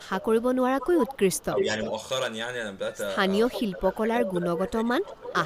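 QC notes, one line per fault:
0.00–0.89 s, 1.52–1.77 s, 3.55–5.43 s: speech suppressed in double talk. The speech dips, by about 15 dB at worst, while another talker overlaps. This is likely an echo canceller mistaking the near talker for loudspeaker echo. It is a loss of sound, not an added copy.
0.80–1.60 s, 3.46–3.69 s, 4.25–4.34 s, 5.07–5.33 s: echo leak. A faint repeat of the speech trails it by a steady 348–352 ms, about 10 to 15 dB down. This is likely loudspeaker pickup the far end's canceller missed. The fixed delay distinguishes it from reverberation.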